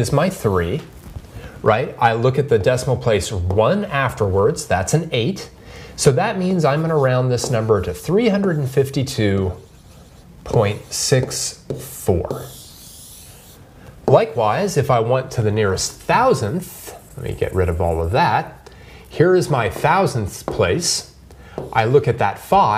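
No technical faults can be heard anywhere in the recording.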